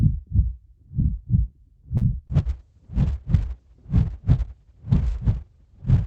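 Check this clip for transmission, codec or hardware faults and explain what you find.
Three transmission faults appear, all clustered around the two-second mark.

From 1.97 to 2.03 s, a short stall from a late packet: the jitter buffer ran dry, so the receiver held the last sound for 40 ms. On a spectrogram this shows as a frozen, smeared slice, and overall delay grows by 40 ms.

From 2.27 to 2.31 s, a short concealed packet loss: about 20 ms never arrived and was synthesized from preceding audio. It sounds like a brief smear and shows as a blurred, slightly flattened patch in the waveform.

From 2.31 s to the end, a call bitrate drop: the encoder fell from 48 to 6 kbps, staying at its lowest for 1.5 s. Bandwidth narrows from 20 kHz to 8 kHz, so the sound turns muffled and watery, and the spectrogram loses everything above 8 kHz.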